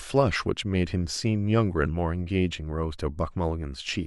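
Nothing stood out on listening to this speech recording.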